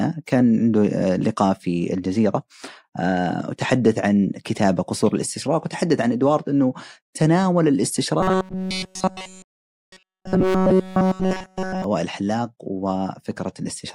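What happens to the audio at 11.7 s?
At 11.7 s the speech is near the end of a stretch of robotic sound from repeated short buffers, running from about 8.21 to 11.84 s. Throughout that span the voice becomes a rigid, metallic buzz at 188 Hz. It still roughly tracks the words. The likely cause is audio arriving too slowly, with essentially every gap filled by looping a fragment of about 5.3 ms while the real audio is skipped.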